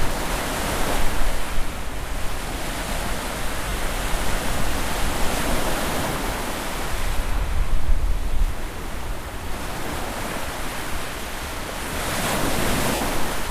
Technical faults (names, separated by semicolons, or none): lost LE Audio frames